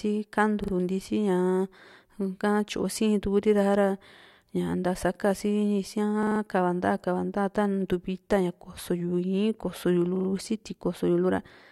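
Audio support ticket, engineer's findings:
Repeated buffer, four events. Playback device starved of new data and replayed its last buffer instead of waiting. Each repeat about 43 ms, which fits a 2048-sample buffer. Heard as short speech stutters with hard joins at each repeat. 0.64–0.73 s: two extra plays. 4.18–4.27 s: two extra plays. 6.23–6.40 s: four extra plays, longest stutter. 10.16–10.28 s: three extra plays. No audible audio loss afterwards; the speech picks up where it stalled.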